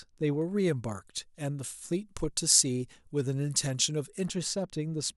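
From 0.42 to 4.26 s, pre-emphasis left on: uncut treble boost, about 13 dB at 10 kHz, sounds sibilant, rising steadily, not a presence peak.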